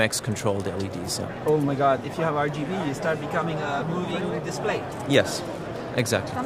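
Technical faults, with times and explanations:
No technical faults can be heard anywhere in the clip, and the signal stays steady and intact from its opening to its close.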